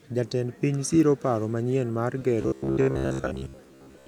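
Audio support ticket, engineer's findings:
Robotic sound from repeated short buffers, 2.42 s to end, after "siro paro manyien mar". Rigid metallic buzz at about 67 Hz. Waveform shows identical 15 ms segments tiling; spectrogram shows a harmonic comb at 67 Hz spacing. Likely buffer underrun, with most real audio skipped.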